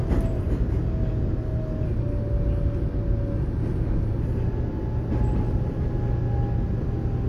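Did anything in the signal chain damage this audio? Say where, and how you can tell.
Yes. From 1.88 s to 4.21 s the sound drops about a semitone (110 cents) flat and runs roughly 6% slow, with speed and pitch moving together, then snaps back to normal at 4.21 s. This is a drift correction step at the driver or buffer stage. The likely cause is clock-matching software that abruptly slowed playback for about 2.3 seconds to refill a draining buffer instead of adjusting the rate gradually.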